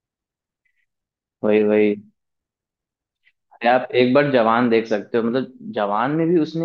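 A short speech recording, and there's nothing technically wrong to point to here at all.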